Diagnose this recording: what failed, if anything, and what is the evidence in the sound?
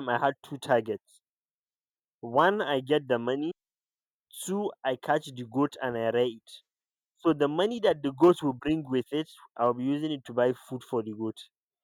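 Nothing in this speech recording stood out as a fault on listening, so there is no failed stage to point to.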